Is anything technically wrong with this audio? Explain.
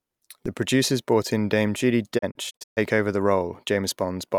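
Yes, the speech has two faults.

At 0.46 s a DC step shifts the waveform's zero line, heard as a low thump. The offset decays as a 20 Hz high-pass pulls it back, visible as a brief low-frequency smear.

From 2.17 to 2.79 s a digital broadcast dropout mutes the receiver. About 256 ms is lost in holes spread over 576 ms, the longest 128 ms, each fading in 20 ms. These show as blank vertical gaps.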